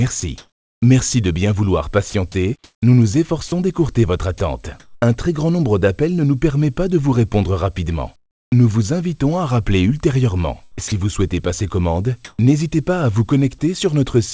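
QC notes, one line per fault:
0.20–5.02 s, sound chopped by the voice detector: choppy sound with two or more holes, about 1 s in total replaced by synthetic fill, likely from the detector toggling transmission.
8.16–8.52 s, comfort noise in place of the background: the background turns to steady, featureless hiss about 20 dB quieter, likely synthetic noise filling a pause in transmission.
10.88–10.92 s, sound dropped by the voice detector: 40 ms of sound gives way to comfort noise, likely because the detector mistook it for background and stopped sending.
10.88–12.39 s, comfort noise in place of the background: the real background gives way in places, about 0.18 s in all, to smooth synthetic noise, likely filled in during untransmitted pauses.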